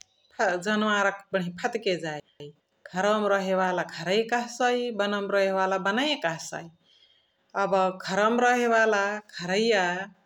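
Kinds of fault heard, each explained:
Chunks out of order: between 2.2 and 2.6 s a 200 ms piece of the speech arrives one chunk late and plays after the piece meant to follow it. Nothing goes missing, yet the moment sounds jumbled, with three hard joins. A waveform or spectrogram shows abrupt vertical discontinuities at those seams and the two segments visibly swapped.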